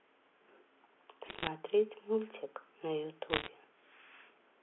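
Bit errors on a digital phone line flip single samples from 1.26 to 1.47 s and again, slightly denser, from 3.30 to 3.48 s, scattering sharp ticks that crackle over the narrowband telephone speech.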